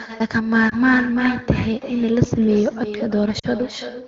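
With no echo canceller at the far end, the loudspeaker feeds back into the microphone. Throughout, the speech is shadowed roughly a third of a second later by a thinner copy about 11 dB down. Lost AMR speech frames follow. From 0.69 to 0.75 s, the decoder conceals a gap that fits a single 20 ms frame, causing a brief dip or warble in the wideband sound. From 3.39 to 3.46 s, concealment bridges about 40 ms, which fits two consecutive frames, so the sound drops to near silence before returning weak or rough.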